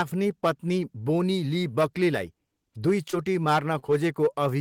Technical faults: short concealed packet loss

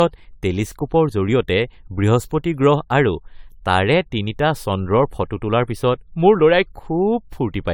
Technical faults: generation loss

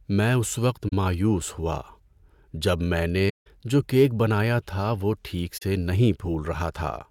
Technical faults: AAC frame loss with muting

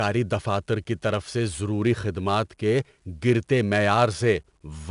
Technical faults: 4-bit ADPCM compression

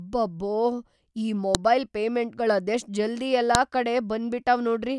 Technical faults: file header played as audio

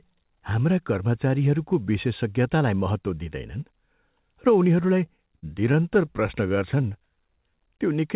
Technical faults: repeated stalls (stutter); jitter buffer slow-down

